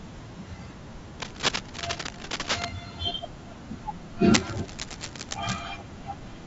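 Speech runs grainy and rough from start to finish, with noise filling the gaps between harmonics and a thin, synthetic-sounding top band, most likely low-delay AAC compression (AAC-ELD) at a bitrate around 32 kbps. On a spectrogram the harmonic lines look smeared, with speckled energy between them. Cable scratch noise, likely from a worn cable or connector being moved, adds dense, uneven rustling about as loud as the speech from 1.20 to 2.71 s and from 4.34 to 5.60 s. It shows as ragged broadband bursts on the spectrogram and spiky fuzz over the waveform.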